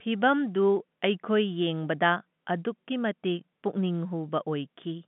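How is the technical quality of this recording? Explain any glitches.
No glitches can be heard; the speech comes through an ordinary telephone channel with G.711 telephone coding, its band running from about 150 Hz to 3.5 kHz with nothing above 3.8 kHz, and at most a faint trace of the format's level-following quantisation noise, which fits a standard 64 kbps mu-law line.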